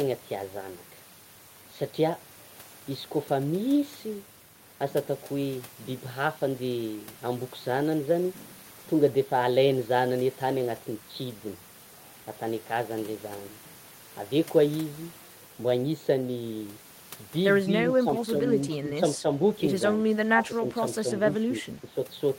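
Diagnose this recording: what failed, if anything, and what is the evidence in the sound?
Call processing failed: speech suppressed in double talk, with the level dipping by roughly 10 dB from 19.96 to 20.82 s, again from 21.02 to 21.07 s, and from 21.45 to 21.94 s. The likely cause is the echo canceller attenuating the near-end talker alongside echo while both sides spoke.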